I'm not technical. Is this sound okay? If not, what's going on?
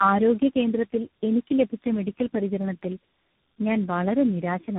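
No. Throughout, the speech sounds muffled, rough and warbly, with nothing above about 3.8 kHz. This is tandem speech coding: the call passed through three different speech codecs in a row, each squeezing audio that the previous one had already damaged.

From 2.44 to 3.0 s, just after "കേന്ദ്രത്തിൽ എനിക്ക് ലഭിച്ച മെഡിക്കൽ", four tiny ticks, the longest about a millisecond long, are heard. These are CD scratch ticks: a blemish on the disc spoiled more data than the player could repair, so it patched over the gaps.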